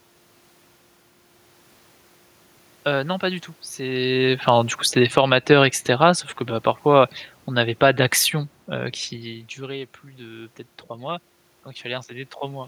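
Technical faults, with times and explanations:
3.97–7.98 s, automatic gain falling: just after "non pas du tout" the level eases down by about 6 dB over four seconds as the gain control judges the input too loud or its background noise too strong and backs off its gain. The room noise sinks together with the speech, which separates this from the talker moving near 4 s and again near 9 s, where only the voice changes and the room noise holds steady.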